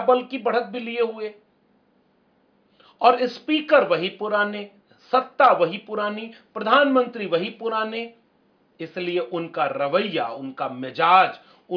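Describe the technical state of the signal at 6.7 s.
At 6.7 s the signal is intact, with no technical fault present at that moment.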